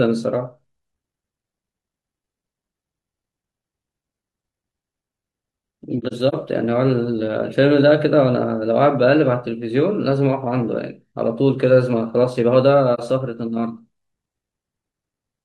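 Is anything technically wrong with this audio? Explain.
Yes. The speech has AAC frame loss with muting at two points: scattered dropouts from 5.98 to 6.34 s, about 128 ms of missing audio spread over roughly a third of a second with no gap much longer than 40 ms, and a single 43 ms dip from 12.94 to 13.00 s. Lost frames were replaced with silence, and the overlapping windows fade the sound out and back in, so each gap is soft-edged. A spectrogram shows narrow full-band blank columns, and the waveform shows tapered notches.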